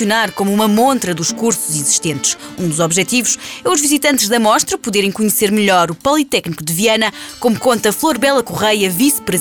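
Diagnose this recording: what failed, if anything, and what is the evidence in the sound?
Nothing failed here as far as I can hear; no stage of the chain leaves a mark on the sound, so there's nothing to diagnose.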